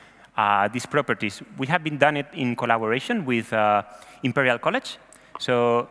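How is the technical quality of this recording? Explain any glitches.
No glitches or faults heard.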